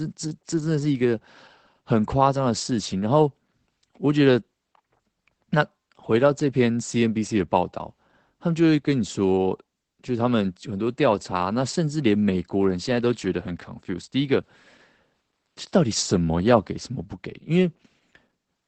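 Opus voice compression runs throughout: the speech is muffled, hoarse and faintly robotic, with a band stopping near 8 kHz. This is not swirly MP3 smearing, and it fits roughly 12 kbps SILK.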